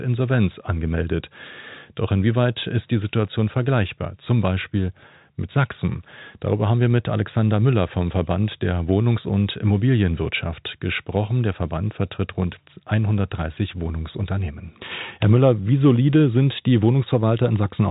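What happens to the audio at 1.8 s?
At 1.8 s the speech comes through intact, carried on a telephone-band G.711 channel with no fault at that moment.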